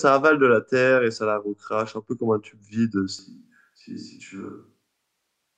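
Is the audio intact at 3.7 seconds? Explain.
No. From 3.19 s to the end the speech turns roomy and hollow, thinner in bass and roughly 10 dB quieter, likely a switch to a distant microphone.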